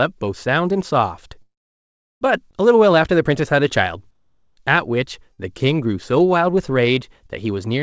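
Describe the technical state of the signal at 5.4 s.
A burst of packet loss runs from 5.33 to 5.40 s: about 51 ms of concealment extends and fades the last sound, then the speech resumes with about 60 ms missing.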